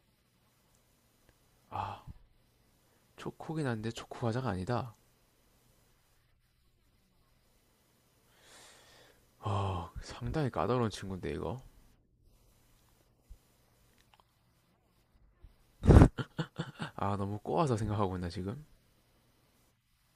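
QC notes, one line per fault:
No fault found, so there is nothing to log in the QC notes.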